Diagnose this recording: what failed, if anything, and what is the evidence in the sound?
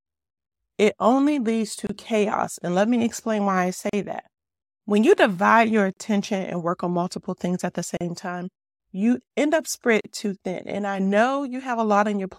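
The speech drops out into brief silences with smeared edges, then resumes exactly where it stopped. These come regularly every 2.0 s: 1.87–1.89 s (26 ms), then about 38 ms at 3.89–3.93 s after "me explain why I", 5.93–5.97 s between "you divide your" and "and work on multiple", 7.97–8.01 s between "multiple things at the" and "time you end up", and 10.01–10.04 s. This is a gap at a join of encoded pieces, a codec-stage fault. Each two-second segment was encoded separately and spliced untrimmed, so every segment's encoder start-up delay and final-frame padding remain as inserted silence.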